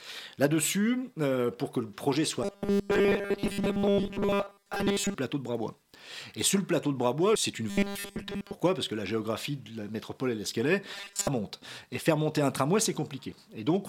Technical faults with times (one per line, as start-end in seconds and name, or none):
2.43-5.15 robotic sound from repeated short buffers
7.70-8.54 robotic sound from repeated short buffers
10.94-11.28 robotic sound from repeated short buffers